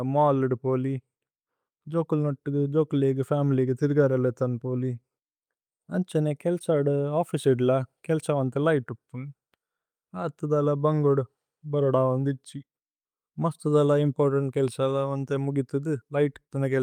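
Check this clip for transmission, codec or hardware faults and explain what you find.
No faults are audible anywhere in this speech recording.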